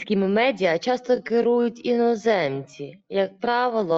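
A time-stretched section runs from 1.0 s to the end of the speech. At that point the pace drops abruptly to about 0.66 times normal speed while the pitch stays where it was. This is likely software lengthening the audio to fit a longer slot, repeating short fragments so the pitch holds steady. Because it is slowed, the speech drags.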